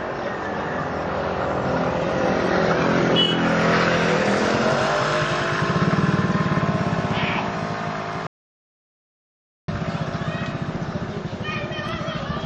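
At 8.27 s there's an audio dropout to silence: the sound stops dead mid-flow and doesn't come back until 9.68 s, so roughly 1.41 s simply vanishes. The gap is silent with no room tone or hiss underneath, and whatever was happening in that stretch is gone for good. The likely cause is the input dropping out, perhaps a loose connection, a link failing or an accidental mute, while the recorder kept writing silence.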